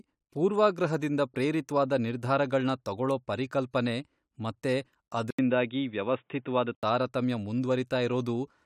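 From 5.31 to 6.83 s, after "ನಿರ್ಧಾರಗಳ್ನ ತಗೊಳೋ ಪರಿಕಲ್ಪನೆ ಮತ್ತೆ", likely an input switched to a poorer device: the speech dulls, the spectrogram is empty above 3.8 kHz, and the waveform shows an 80 ms gap.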